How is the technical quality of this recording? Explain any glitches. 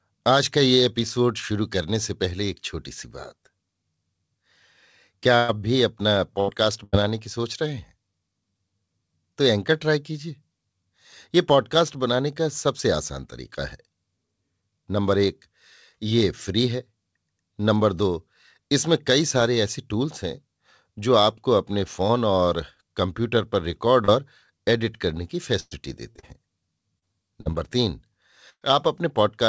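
The speech has network glitches from packet loss in three places. It travels over a call path with nothing above 8 kHz, which fits a wideband call codec such as G.722.

Repeated packet loss (robotic sound) occurs from 5.36 to 6.96 s and again from 25.60 to 28.64 s. Three gaps in the first stretch and six in the second went unreceived. The receiver bridged each by extending the preceding sound, with gaps up to 124 ms, leaving choppy speech with pieces missing.

Short concealed packet loss hits at 24.05 to 24.11 s. About 40 ms failed to arrive in time, so the decoder continued the previous sound and then blended back into the real signal. It is heard as a brief smear or wobble.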